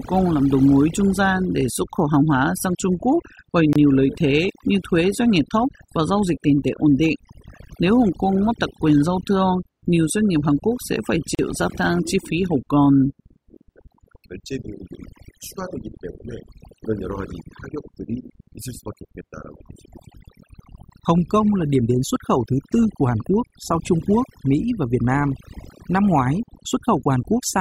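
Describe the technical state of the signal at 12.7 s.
At 12.7 s the speech is under overdone noise removal, which runs through the whole clip rather than being a local event. The noise reducer was set too hard, so any frequency band sitting near its noise estimate gets pushed down or shut off, and quieter parts of the voice are removed along with it. The background falls to near silence scattered with twinkling specks. Those isolated specks set it apart from a low-bitrate codec, whose smearing and pre-echo stay tied to the signal and don't leave a gated, sparkling silence between phrases.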